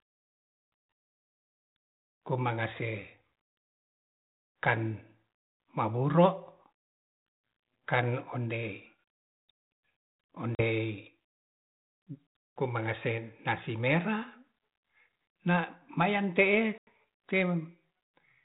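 Packet loss on an ADPCM call hits at 10.55 s and 16.78 s. About 40 ms, then 90 ms, of this G.726 speech drops to hard-edged silence. The decoder's predictor and step size drift from the sender's, so speech resumes with brief distortion.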